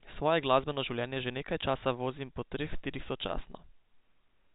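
Nothing goes wrong anywhere in this speech, which simply carries the usual narrow telephone band of G.711 coding, with nothing above 4 kHz.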